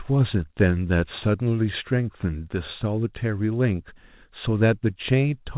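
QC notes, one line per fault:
Nothing to flag on this one, just a speech clip carried over a G.711 mu-law call line at 64 kbps, so everything up top stops at about 4 kHz, as you'd expect for that codec.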